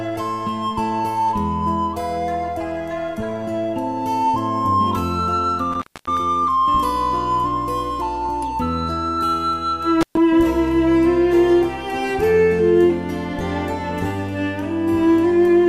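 At 5.72 s the sound cuts out abruptly. This is an intermittent contact: a loose plug or cable briefly loses its connection. Crackle marks the break and the reconnection. The line stays open for about 262 ms, leaving faint hiss, and the disturbance settles by 6.17 s. It happens again at 10.01 s. This dropout is shorter, open for about 124 ms, with the same crackling edges. Normal sound returns by 10.17 s.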